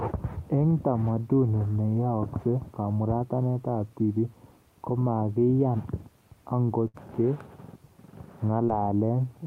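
It's a short speech recording with two network dropouts. The first is a burst of packet loss from 6.87 to 6.96 s: a run of packets didn't arrive in time, so the receiver kept stretching the last bit of sound it had for about 65 ms, fading it as it went. When the real audio picks up again, about 60 ms of the original is simply gone, so you hear a held, fading smear followed by a small jump forward. The second is a short concealed packet loss at 8.66 to 8.70 s. Only about 20 ms went missing, and the decoder patched it with roughly 17 ms of continued sound before blending back in. That's brief enough to come across as a quick smear or wobble in the speech rather than a gap.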